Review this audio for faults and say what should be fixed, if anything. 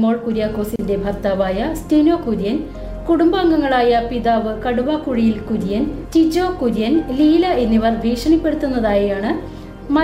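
A brief dropout to silence at 0.76 s, about 33 ms long, with smeared edges, then the sound resumes where it stopped: a gap at a join of encoded pieces, where separately encoded segments were butted together with their encoder delay and final-frame padding left in. Prevent it by trimming each segment's encoder delay and padding before joining, or by encoding the material as one continuous stream.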